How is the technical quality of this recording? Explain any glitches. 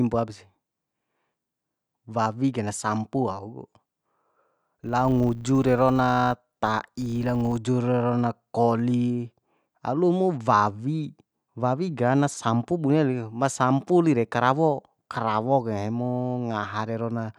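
The speech has one glitch. From 4.84 to 7.59 s, a filter restarted on every block produces a 100 Hz buzz. The filter drops its memory at each block boundary and starts again from silence. That leaves a small transient every 10 ms, rising and falling with the speech level.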